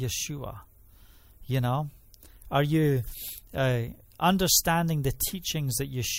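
At 5.21 s a single sharp click cuts through the speech, showing as a thin vertical line spanning the spectrum. The likely cause is dropped samples: a tiny fraction of a millisecond of the stream went missing, so the waveform jumps abruptly from one value to a later one instead of continuing smoothly. The gap is far too brief to remove any audible sound. What remains is the discontinuity itself, heard as that isolated click.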